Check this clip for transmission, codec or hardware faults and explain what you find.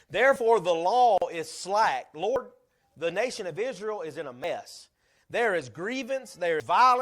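Two kinds of fault appear in this speech clip: a gap at a join of encoded pieces, and three jumps that sound like dropped buffers.

At 1.18 s the speech stops for about 39 ms, until 1.22 s. The edges are smeared, and the speech resumes exactly where it stopped. Separately encoded pieces were joined untrimmed, keeping encoder delay and end padding. Real silence is what separates it from a skip.

At 2.36 s, 4.44 s and 6.6 s there is no silence, and the speech jumps forward. Roughly 40 ms is lost at the first two points and about 100 ms at 6.6 s. The likely cause is a dropped buffer (overrun): samples were overwritten before they were read, so the two sides of the lost stretch were joined directly.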